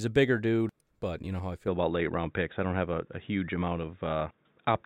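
At 1.68 s the speech abruptly turns dull and boxy and stays that way to the end, with nothing left above about 3.8 kHz. There is no gap at the change, just a modest jump in level and a faint new noise floor sitting well below the signal. The tone and band limit together point to the input likely having switched to a poorer device mid-recording, such as a different microphone or a headset's call profile.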